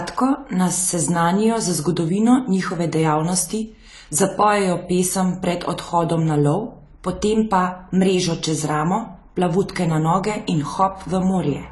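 From start to finish the speech is band-limited, with nothing above 11.5 kHz, and the damage is plainly audible: sibilants turn fizzy and smeared, and sustained vowels warble. This is likely AAC compression, AAC-LC at a low bitrate that fits about 32 kbps, quantising the spectrum so coarsely that bands drop out or are filled with substitute noise. A simple low-pass filter would only dull the top. It would not add this swirling, unstable texture below the cut-off.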